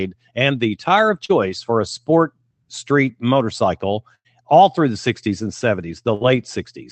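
At 1.25 to 1.31 s, between "and the tire of" and "for a sport street", short concealed packet loss left about 40 ms undelivered. The receiver extrapolated the preceding sound across the gap, leaving a brief smear. Bursts of packet loss follow at 4.15 to 4.27 s, dropping about 100 ms between "a sport street motorcycle" and "all through the", and at 6.15 to 6.23 s, about 60 ms. Each time the receiver stretched the last sound and faded it, so it becomes a held buzz or dying hiss before the audio resumes with material missing.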